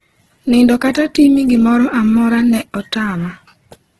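Throughout, the speech carries heavy Opus compression damage, likely from encoding at a very low rate in the music-oriented CELT mode, which fits roughly 12 kbps. Starved bands are filled with folded or noise content, so the sound turns grainy and rough, with nothing above 12.2 kHz.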